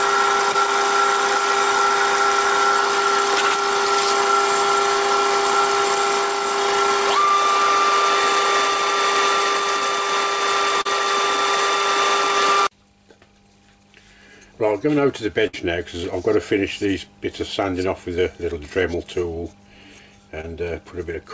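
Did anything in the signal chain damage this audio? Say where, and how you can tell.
Yes. The damage is at the network stage, as short concealed packet loss. Three brief smears or wobbles occur, at about 0.52 s, 10.82 s and 20.41 s, each lasting roughly 40 to 55 ms. About 20 ms of audio is missing at the first and last, and about 40 ms at the second. The receiver's concealment extended the preceding sound over each hole, then crossfaded back into real audio.

The second kind is a burst of packet loss at 15.47 to 15.55 s. About 60 ms went missing in a row, which points to several consecutive packets lost or arriving too late. Concealment stretched the last sound across the gap and faded it down, giving a held buzz or fading hiss. Then the audio resumes further along, with that stretch gone. The G.722 codec passes nothing above 8 kHz throughout.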